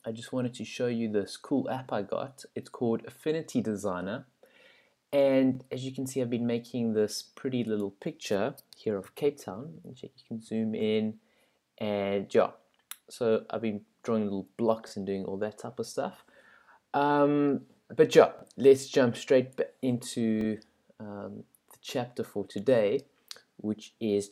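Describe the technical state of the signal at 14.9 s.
A short catch sits at 14.89 to 14.93 s, where a slice of sound about 23 ms long repeats before playback jumps ahead as if it had kept running. This Bluetooth stutter fits one lost or late packet, with the receiver replaying its last buffer until new data arrived.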